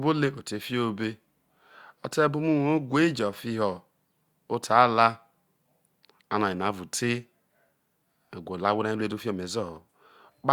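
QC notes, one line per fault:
No faults heard anywhere in the speech.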